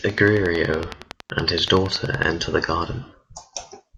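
From 0.10 to 2.24 s, a train of clicks runs over the speech at a steady 10.8 per second, about twenty in all. The pulses match in shape and peak at about 10 dB above the signal. They sound like regular ticking. The likely cause is interference from nearby equipment or a faulty connection or power supply.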